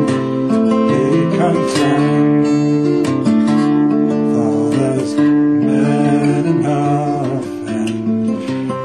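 Nothing in the recording stood out as a technical problem on listening.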